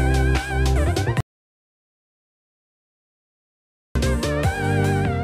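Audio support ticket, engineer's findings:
Audio dropout to silence, 1.20–3.95 s. Signal cuts to silence mid-flow for 2.75 s, no room tone, then resumes abruptly. Likely input loss upstream (disconnected device, failed link or stray mute) while recorder kept writing silence. Content in gap unrecoverable.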